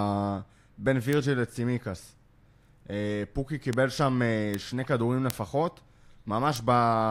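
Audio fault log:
1.13 to 6.56 s, bit error spikes at 1.13, 3.73, 4.54, 5.30 and 6.56 s: five isolated sharp ticks, each lasting only a sample or a few, peaking at about -8, -14, -8, -2 and -14 dBFS. A single flipped bit makes the sample value leap by a power of two and snap straight back. That near-instant step is broadband, so each tick sounds bright and hard and has no relation to the surrounding speech.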